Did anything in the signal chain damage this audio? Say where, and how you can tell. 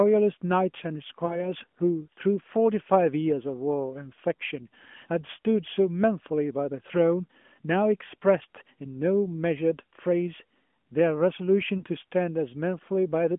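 Yes. At 1.26 to 1.46 s and 11.78 to 11.84 s, lost AMR speech frames on the radio network make the decoder stretch the last pitch with fading gain. That gives a smeared warble, not a buffer dropout's hard silent gap.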